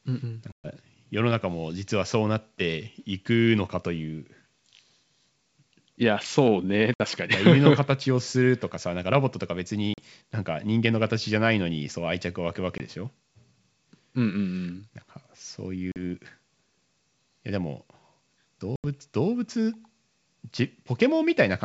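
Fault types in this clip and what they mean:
Packet loss on an ADPCM call: Six hard-edged silent holes, the longest about 120 ms near 0.5 s and the shortest about 20 ms near 12.8 s, with gap lengths that fit 20 ms packets. Unlike a plain dropout, the speech does not come back cleanly. The decoder's adaptive predictor and step size have drifted from the sender's, so each restart brings a click, wrong level or brief distortion before settling, over otherwise clear G.722 wideband sound.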